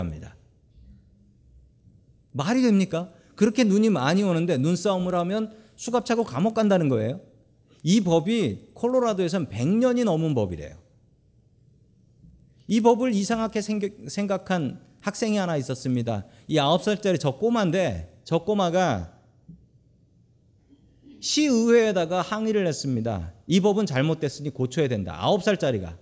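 From the start to about 18.2 s, you get a steady tick at 10 Hz riding under the speech. That's a resampler restarted on every block, with each 100 ms chunk converted in isolation (likely 24 kHz down to 16 kHz), leaving a small glitch at every seam.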